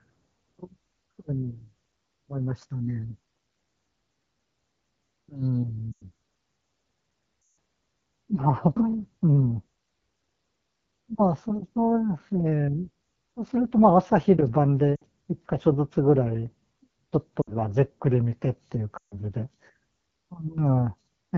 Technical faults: AMR wideband (HD Voice) codec; lost AMR speech frames

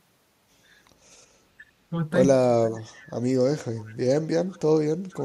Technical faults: echo leak

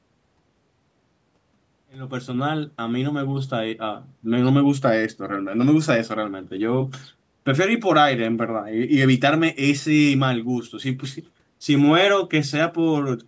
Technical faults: none

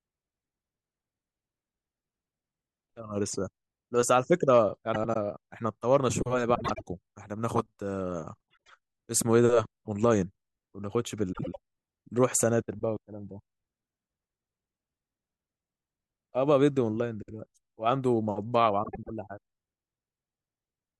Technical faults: frames out of order

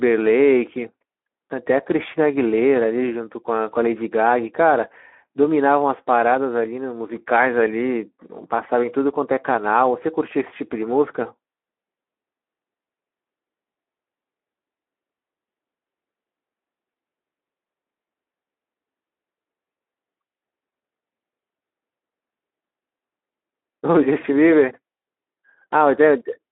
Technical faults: Speex codec

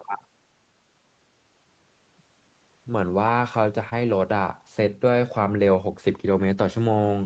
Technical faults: short concealed packet loss

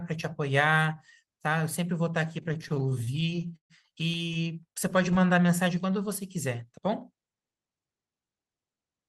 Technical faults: repeated stalls (stutter); jitter buffer slow-down

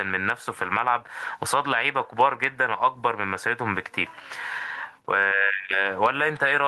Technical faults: gain pumping

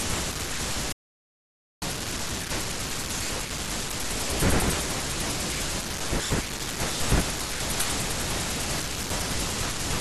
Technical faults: audio dropout to silence

